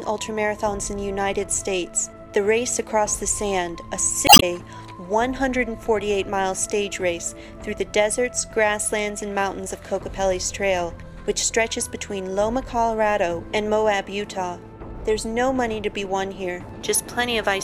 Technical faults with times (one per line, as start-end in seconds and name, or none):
4.25-4.43 damaged data in a compressed stream